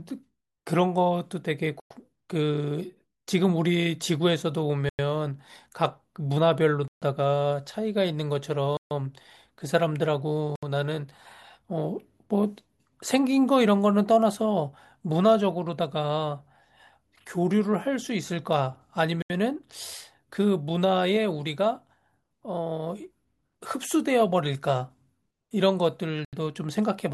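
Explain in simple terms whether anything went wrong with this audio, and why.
The speech briefly drops to silence seven times, at 1.80, 4.89, 6.88, 8.77, 10.56, 19.22 and 26.25 s, each gap lasting 70 to 140 ms. These are most likely a Bluetooth stall: the wireless link hiccupped and the headphones ran out of audio. Unlike a simple skip, the sound resumes where it stopped or slightly later.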